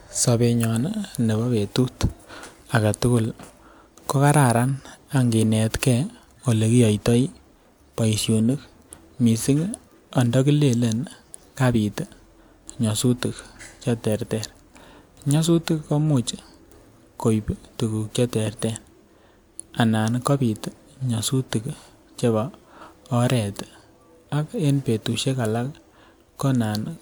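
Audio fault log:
No faults are heard in this speech clip. There is nothing to log for any point in the recording.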